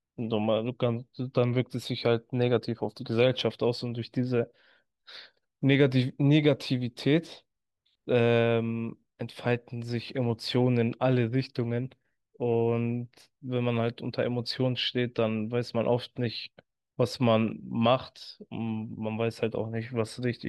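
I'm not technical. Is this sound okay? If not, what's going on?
Yes, no faults detected.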